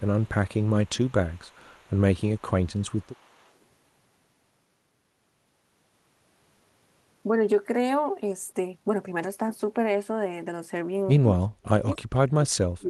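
From 0.0 to 3.49 s, a faint copy of the speech returns 288 ms late, in pieces at 0.0–0.31, 0.54–1.96, 2.17–2.41 and 2.63–3.49 s. This is an echo leak, likely from a loudspeaker echo canceller letting residue through. It sits roughly 35 to 40 dB down.

From 8.25 to 11.13 s, a jitter buffer speed-up trims pitch-period slices. The speech runs at 117% with unchanged pitch, losing about half a second and sounding hurried.

From 11.39 to 12.89 s, the speech dips deeply, by around 40 dB at worst. This is speech suppressed in double talk, likely the canceller muting the talker while the far side speaks.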